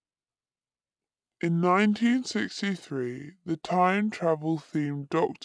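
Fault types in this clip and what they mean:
Wrong sample rate: the speech runs slow and low for the whole clip because the samples are played back more slowly than they were captured, with no conversion. It plays at about 0.69 times normal speed and about 6.5 semitones lower, which fits a 32 kHz recording played at 22 kHz. Unlike a pitch shift or a time stretch, speed and pitch drop together by the same ratio, so the timing and the formants deepen together.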